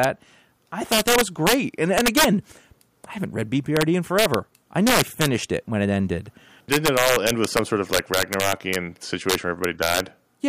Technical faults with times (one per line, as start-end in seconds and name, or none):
0.04 integer overflow
0.92-1.54 integer overflow
1.98-2.24 integer overflow
3.77-3.82 integer overflow
4.19-4.34 integer overflow
4.87-5.26 integer overflow
6.72-8.76 integer overflow
9.30-10.00 integer overflow